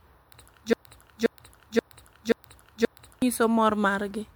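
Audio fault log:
throughout: generation loss. The speech sounds swirly, smeared and hollow, with soft attacks, likely from about three rounds of MP3 decoding and re-encoding near 100 kbit/s. Each pass requantises on a shifted frame grid, stacking noise and spectral holes. Nothing extends above 20.1 kHz.
0.73–3.22 s: broken-record loop. A 0.53 s fragment repeats exactly five times back to back, likely because the player or stream stalled and kept resending its last buffered piece. The speech that belonged in those 2.5 seconds is lost.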